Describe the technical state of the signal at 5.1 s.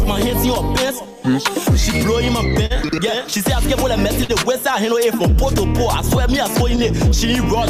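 At 5.1 s the signal sits inside a stretch of repeated timing corrections running from 0.68 s to 7.10 s. The receiver keeps inserting short repeated slices of audio so playback can keep pace with a sender that delivers too little, which lets the sound run at 98% speed and adds roughly a seventh of a second over the stretch. It is heard, if at all, as faint hiccups and a slightly dragging, uneven tempo. A waveform would show small duplicated fragments at irregular spacing, and a spectrogram would show brief repeated columns with discontinuities at their seams.

The underlying fault is clock drift between sender and receiver, present throughout the clip. The sender's clock runs around 4% slow relative to the receiver, so the jitter buffer steadily drains rather than holding level, and every correction near 5.1 s leans the same way, stretching the audio instead of trimming it. On a spectrogram this appears as subtle, recurring edit boundaries, unevenly spaced. 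The waveform would show slight envelope stutters instead of clean continuous decay.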